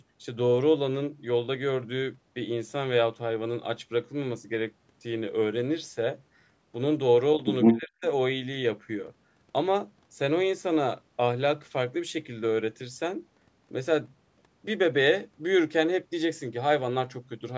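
A speech clip in which the talker's level collapses between 7.7 and 8.03 s, falling by around 35 dB for roughly a third of a second before recovering. On a waveform the envelope pinches to a thin sliver; on a spectrogram, whose energy already stops at 8 kHz from the call's microphone processing, the whole band fades to near-black over that stretch. This is likely speech suppressed in double talk, the echo canceller mistaking the talker for loudspeaker echo while both sides spoke and muting them.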